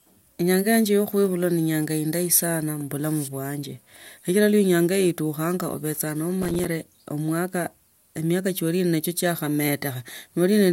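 From 6.43 to 6.66 s, a gritty burst of crackle tears through the speech for about a quarter of a second, then stops cleanly. This is processor overload crackle. The processor fell behind and missed a run of buffer deadlines, around ten of them. Each missed buffer became a short hole of silence with hard edges. The spacing of the clicks suggests buffers of roughly 5 ms. Strung together, those dropouts create the rough, tearing texture.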